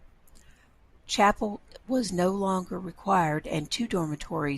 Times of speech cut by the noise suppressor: none

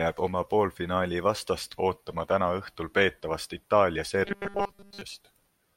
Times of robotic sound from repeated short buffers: 4.25-5.01

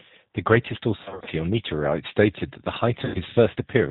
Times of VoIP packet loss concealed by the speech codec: 1.03-1.28, 3.05-3.21

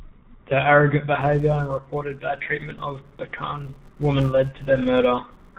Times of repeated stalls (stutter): none

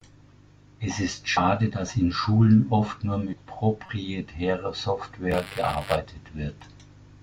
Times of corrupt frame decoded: 3.86-3.89

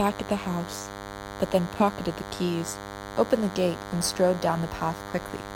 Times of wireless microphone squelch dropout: none

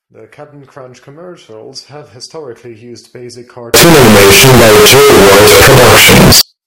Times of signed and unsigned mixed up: 3.74-6.41

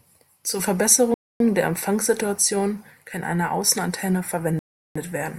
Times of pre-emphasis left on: none

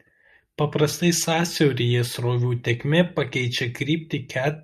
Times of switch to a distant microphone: none

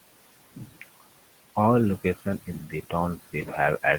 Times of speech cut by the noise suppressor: 0.56-0.83, 2.47-2.93

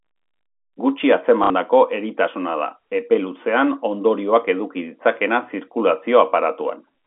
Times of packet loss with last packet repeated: 1.44-1.50

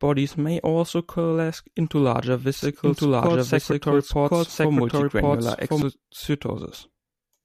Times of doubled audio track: 2.62-5.82

